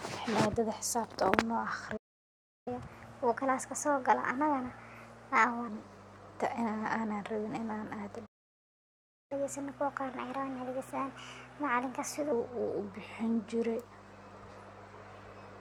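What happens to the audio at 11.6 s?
At 11.6 s the speech is running fast and sounds noticeably higher, about four semitones up, at 1.25 times normal speed. This is catch-up at higher speed, spanning 9.32 to 12.32 s: after a stall, the player resamples its backlog faster to recover lost time, raising pitch and tempo together before dropping back.

Underneath, a steady low 50 Hz tone sits about 20 dB below the speech. That is mains hum, present through the whole clip, where a ground loop or nearby transformer couples the power line into the signal.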